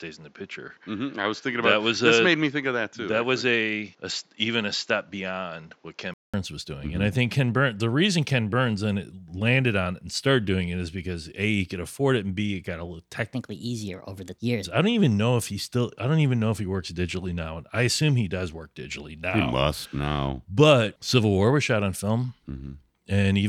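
From the start to about 6.34 s the speech sounds dull and a bit quieter, likely an input switched to a poorer device; a 200 ms gap precedes "was doing". Then, from 13.35 to 14.65 s, between "it got a little" and "I don't even know", there's a section at the wrong speed, likely running 1.27 times fast, so the speech is hurried and roughly four semitones high.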